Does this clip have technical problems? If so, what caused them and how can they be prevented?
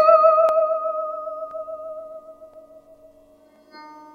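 Yes. The music was processed in 1-second chunks, each starting about 23 ms before the last ended. These overlapping chunks replay that sliver, causing stutters at 0.49–0.51, 1.51–1.54, 2.54–2.56 and 3.56–3.58 s. Advancing each chunk by exactly its length prevents this.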